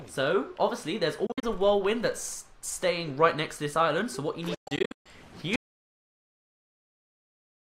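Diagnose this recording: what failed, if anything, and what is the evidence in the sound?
Two stretches break up into short holes: 1.26 to 1.43 s, where about 107 ms goes missing in pieces over 160 ms (longest hole 53 ms), and 4.54 to 5.06 s, with about 373 ms lost across 507 ms (longest 133 ms). Each time the sound picks up further along, as if it kept playing underneath. That's a Bluetooth dropout at the wireless playback link: packets likely arrived late and got discarded, leaving gaps until good ones returned.

Then at 5.56 s everything cuts to silence and stays there to the end, with no room tone at all. That's an audio dropout to silence, and it sits upstream at the capture or input stage rather than in playback. The input was likely lost, through a dropped device, a failed link or a stray mute, while the recorder kept writing silence. Whatever happened after that point isn't in the file.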